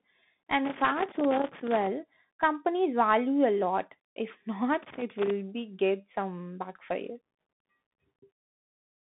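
Throughout, the Bluetooth CVSD headset codec limits the speech to 150 Hz to 3.6 kHz. On a spectrogram there is a hard ceiling near 3.8 kHz. Its slope-tracking coding makes sibilants scratchy and leaves granular hiss.

Loose connector crackle from a contact making and breaking chops the signal from 0.65 to 1.87 s, before "companies value", and from 4.83 to 5.30 s, before "be get some backfire". Both bursts show as jagged waveform spikes and vertical broadband streaks.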